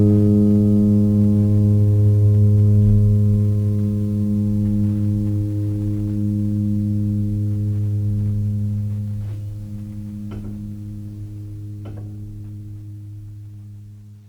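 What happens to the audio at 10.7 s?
Nothing goes wrong at 10.7 s: the music plays through that moment intact, with no dropout, click or other fault.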